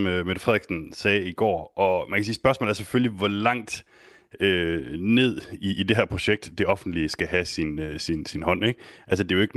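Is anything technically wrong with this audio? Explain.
Yes. Throughout the speech, small timing hiccups recur unevenly. This is clock drift between sender and receiver: the sender's clock runs about 1.5 percent slow, starving the receiver's jitter buffer.

From 0.6 s to 9.6 s, the pacing drags slightly and unsteadily. Repeated timing corrections keep repeating short pieces, running at 99 percent speed and adding roughly 150 ms overall.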